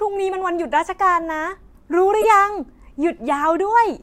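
At 1.21 s a faint blip, and from 2.21 to 2.25 s a much louder burst, each a corrupt frame decoded: damaged bits across a couple of frames put energy at wrong frequencies. Unlike a dropout or click, this is a frame-long chirp, not silence or an instant tick.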